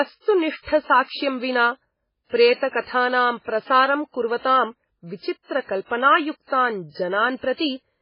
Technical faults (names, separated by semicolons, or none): MP3 compression